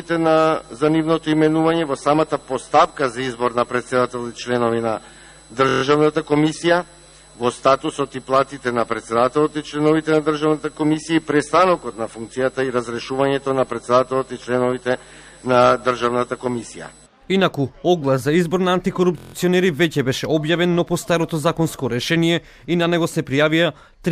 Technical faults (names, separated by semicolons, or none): system hang loop